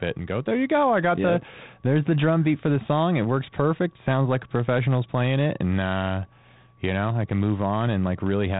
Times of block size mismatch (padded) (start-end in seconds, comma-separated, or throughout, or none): none